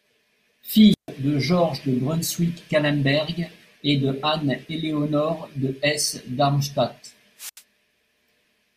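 At 0.90 to 1.09 s the speech shows a wireless microphone squelch dropout: the FM radio link weakens, a short burst of hiss rises, and the receiver's squelch then mutes the output for about 142 ms before the signal recovers and the voice resumes. The same fault recurs at 7.38 to 7.62 s, this time with a shorter hole of about 79 ms of near silence between the noise rise and the returning speech.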